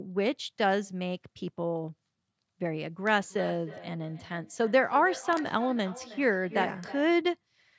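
Feedback echo between two devices runs through this speech clip from 3.1 s to 7.22 s, with the speech coming back roughly every 300 ms and the loudest return about 16 dB below the direct speech. Two devices in the same room were on one call: one played what the other's microphone sent, and that microphone picked the playback up again. An echo canceller only removes what its own device plays, so this loop got past it. The call microphone processing, which leaves nothing above 8 kHz, is working as expected.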